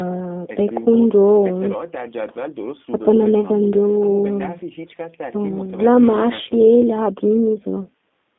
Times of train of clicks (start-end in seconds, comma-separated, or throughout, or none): none